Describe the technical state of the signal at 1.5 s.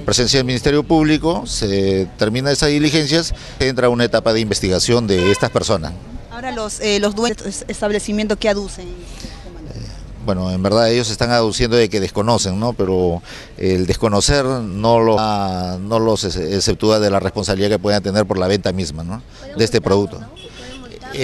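At 1.5 s the signal is intact, with no audible dropout, distortion or other technical fault at that moment.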